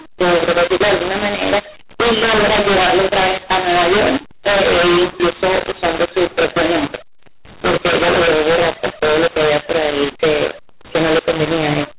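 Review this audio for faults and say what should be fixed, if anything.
Right through the clip there's a mu-law and A-law mix-up. The speech was coded as G.711 mu-law but decoded as A-law, so the log levels get scrambled. Some samples come out too big and others too small, giving a harsh, gritty sound, and the pauses fill with hiss instead of dropping to near silence. The 8 kHz mu-law telephone coding is working as it should. The fix is to set the decoder's law to match the encoder's, ideally by carrying the codec type explicitly rather than leaving either end to assume it.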